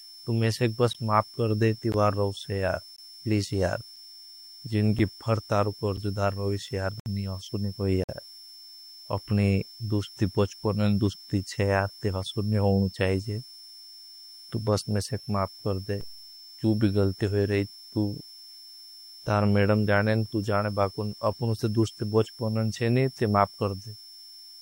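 A steady high whistle sits under the speech for the whole clip. It wavers slightly between 5.3 and 5.4 kHz, roughly 20 dB below the voice. This is switching supply whistle: a power supply's switching has dropped into the audible range.

Early on, the speech is punched through by hard-edged silent holes about once a second: at 0.93, 1.92, 2.96 to 2.98, 3.96, 4.99, 5.97, 7.00 to 7.06 and 8.04 to 8.09 s. The holes range from about 6 to 64 ms. This is a gap between stream segments. The time stamps of consecutive one-second segments don't meet, so the player inserts silence at each boundary. Nothing is lost.

At 16.01 s a single low thump sounds while the speech carries on unbroken. This is a DC step. The waveform's zero line jumps abruptly to a new offset, which then slowly drains away as though through a high-pass filter near 2 Hz.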